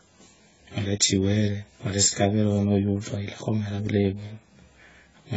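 Throughout the speech, the sound is dull and smeared, with a fizzy, warbling texture on sustained vowels and sibilants. The likely cause is heavy AAC compression of the AAC-LC kind, at a rate that fits a very low bitrate around 16 kbps. The encoder has discarded everything above 7.7 kHz and thinned the remaining bands. On a spectrogram this shows as a hard ceiling at 7.7 kHz with patchy holes and blotchy noise fill below it.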